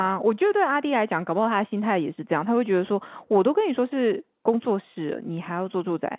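No technical faults can be heard anywhere in this speech clip. It carries the narrow band of an ordinary telephone line, with nothing above 4 kHz and a faint hiss that rises and falls with the level, which fits mu-law G.711 telephone coding working as intended.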